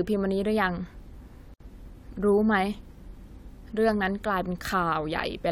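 At 1.54 s the speech drops into a gap at a join of encoded pieces, a 66 ms silence until 1.60 s. Separately encoded segments, spaced 4.0 s apart, were butted together with their encoder delay and end padding left in. The waveform shows a flat hole with smeared edges, and the spectrogram a vertical blank band before the speech resumes mid-stream.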